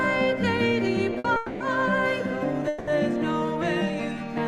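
At 1.18 to 1.26 s, a late packet left the jitter buffer empty, causing a short stall: the last sound is held for about 60 ms, then resumes unbroken. Call audio freezes follow at 1.36 to 1.62 s and 2.68 to 2.89 s, likely from packets held up in transit. Each stretches the last sound into a fading buzz for 240 ms and 190 ms, then resumes where it stopped.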